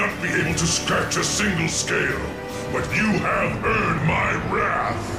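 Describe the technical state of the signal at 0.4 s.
At 0.4 s the signal is intact, with no audible technical fault at that moment.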